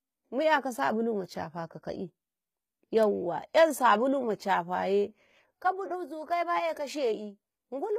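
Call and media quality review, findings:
Likely HE-AAC compression, entire clip: only the low band is coded, and the treble is rebuilt by copying lower bands upward. The speech has gritty, lispy sibilants, a metallic top end and nothing above 14.9 kHz. The plainly audible damage fits HE-AAC v2 at around 20 kbps.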